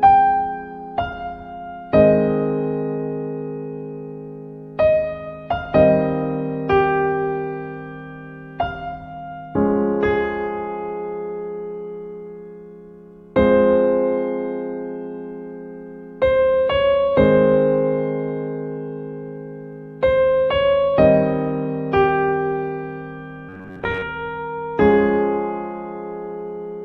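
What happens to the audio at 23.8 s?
Robotic sound from repeated short buffers runs from 23.49 to 24.03 s. Audio likely arrived too seldom, so a fragment of about 10.7 ms was looped for most of that stretch while real audio was skipped, forcing a rigid, metallic buzz near 94 Hz.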